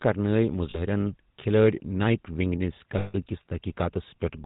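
Speech, carried through the GSM full-rate codec from start to finish. The voice has a buzzy, gravelly roughness and nothing above 4 kHz. That points to a vocal-tract model driven by sparse, regularly spaced pulses, consistent with a 13 kbps GSM encoding. Plain band-limiting would only dull the sound, and a transform codec would swirl or smear it, whereas here the grain rides on every voiced sound. Lost GSM frames occur twice: at 0.70 to 0.78 s, about 40 ms, which fits two missing frames, and at 2.98 to 3.15 s, just after "نایٹ ونگ نِس", about 160 ms. In each gap the last good sound is held as a metallic ring. A network dropout would instead give silence or a click, and a packet-loss repeat in other codecs would sound like a stutter rather than this frozen tone.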